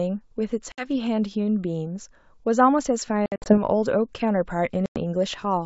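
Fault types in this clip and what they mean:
Packet loss on an ADPCM call: stretches of the wideband G.722 stream drop out and are filled with silence, after which the decoder's predictor and step size no longer match the sender's, so the sound returns with brief distortion before settling. About 60 ms goes near 0.72 s, 140 ms in short bursts across 200 ms around 3.26 s, and 100 ms near 4.86 s. The waveform shows silent gaps with abrupt edges, and the spectrogram shows full-height blank columns.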